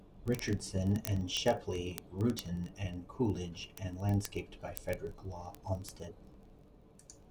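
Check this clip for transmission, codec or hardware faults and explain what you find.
A clocking fault runs through almost the whole recording. From 0.12 s to 7.29 s there are word clock ticks, a few hundred in all, arriving about every 20 ms, roughly 50 per second, sharp and uneven in strength under the speech. The receiving device is free-running rather than locked to the sender's clock, with a mismatch of roughly 1000 ppm. Each time the two clocks drift a sample apart, one sample is dropped or repeated, producing a click.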